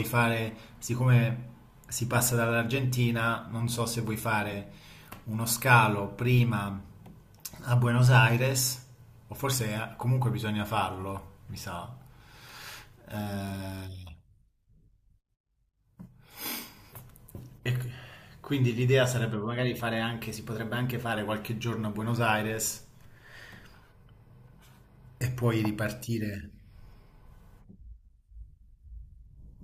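From 19.46 to 21.13 s the speech suddenly runs about 5.3% fast and sits 89 cents sharp, just under a semitone, then snaps back. That's most likely a drift correction step, with clock-matching software jumping the playback rate to rebalance its buffer.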